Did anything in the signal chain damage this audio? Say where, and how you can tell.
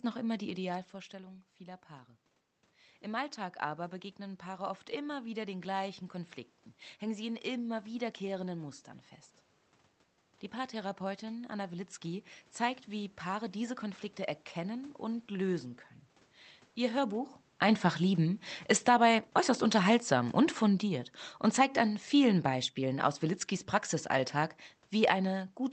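Yes. Automatic gain rising in call processing, 0.4 to 8.8 s, after "noch immer": voice and room noise swell together about 7 dB as gain climbs.

Automatic gain falling in call processing, 16.85 s to the end: voice and background sink together as the AGC backs off.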